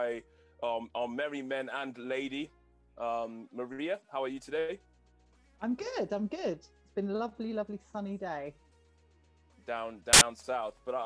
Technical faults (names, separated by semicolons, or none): file tags played as audio